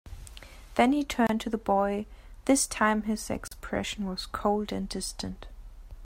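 Speech with two gaps at joins of encoded pieces, about 27 ms at 1.27 s and 37 ms at 3.48 s. Sound resumes exactly where it stopped, unlike a dropout that skips ahead.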